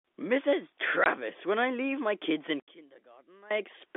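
At 1.04 to 1.06 s there's a packet loss filled with silence, a 20 ms hole with hard edges, which fits one dropped packet on this telephone-band line. From 2.6 to 3.51 s the level sinks by about 22 dB. The likely cause is one channel inverted, so the shared centre cancels when summed to mono.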